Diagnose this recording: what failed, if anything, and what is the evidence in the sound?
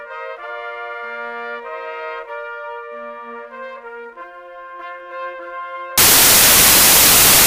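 A sample-format conversion fault: from 5.98 s to the end of the clip at 7.47 s, the reader assembles each sample from the wrong bytes, whether offset by one, in swapped order, or misaligned. The rapidly varying low-order bits land in the most significant positions, so the values become essentially random. The music gives way abruptly to loud, harsh broadband noise for that final stretch.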